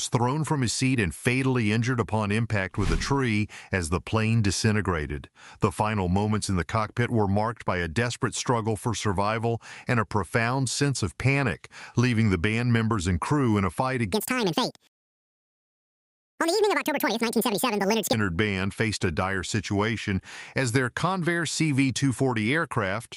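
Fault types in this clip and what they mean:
wrong sample rate: from 14.13 to 18.13 s the sound runs twice as fast and a full octave (12 semitones) higher, which fits 24 kHz audio played at 48 kHz. A spectrogram shows content shifted upward and time-compressed; the waveform's cycles crowd together.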